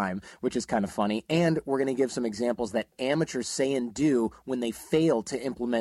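A brief burst of irregular scratching crackle cuts through the speech from 2.82 to 2.84 s, between "to give some examples" and "amateurs say and do". This is loose connector crackle: a worn or dirty contact opening and closing as it shifted, chopping the signal into rough fragments.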